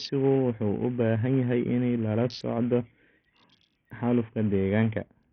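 A speech recording carrying heavy codec damage from start to finish, most likely Bluetooth SBC compression. The treble is thin and unstable, with high-frequency detail dropping in and out, and a gritty, granular noise clings to the voice along with aliasing. That pattern fits a small bit pool: SBC's upper sub-bands are starved of bits while the lower ones are coarsely quantised, which points to a bitrate around 48 kbps.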